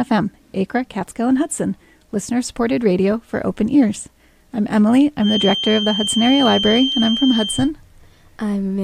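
A feedback whistle sits behind the sound from 5.18 to 7.72 s: a thin, steady 3.2 kHz tone a little below the main signal, likely from a loudspeaker-to-microphone loop held just short of runaway, so it wavers rather than growing into a howl.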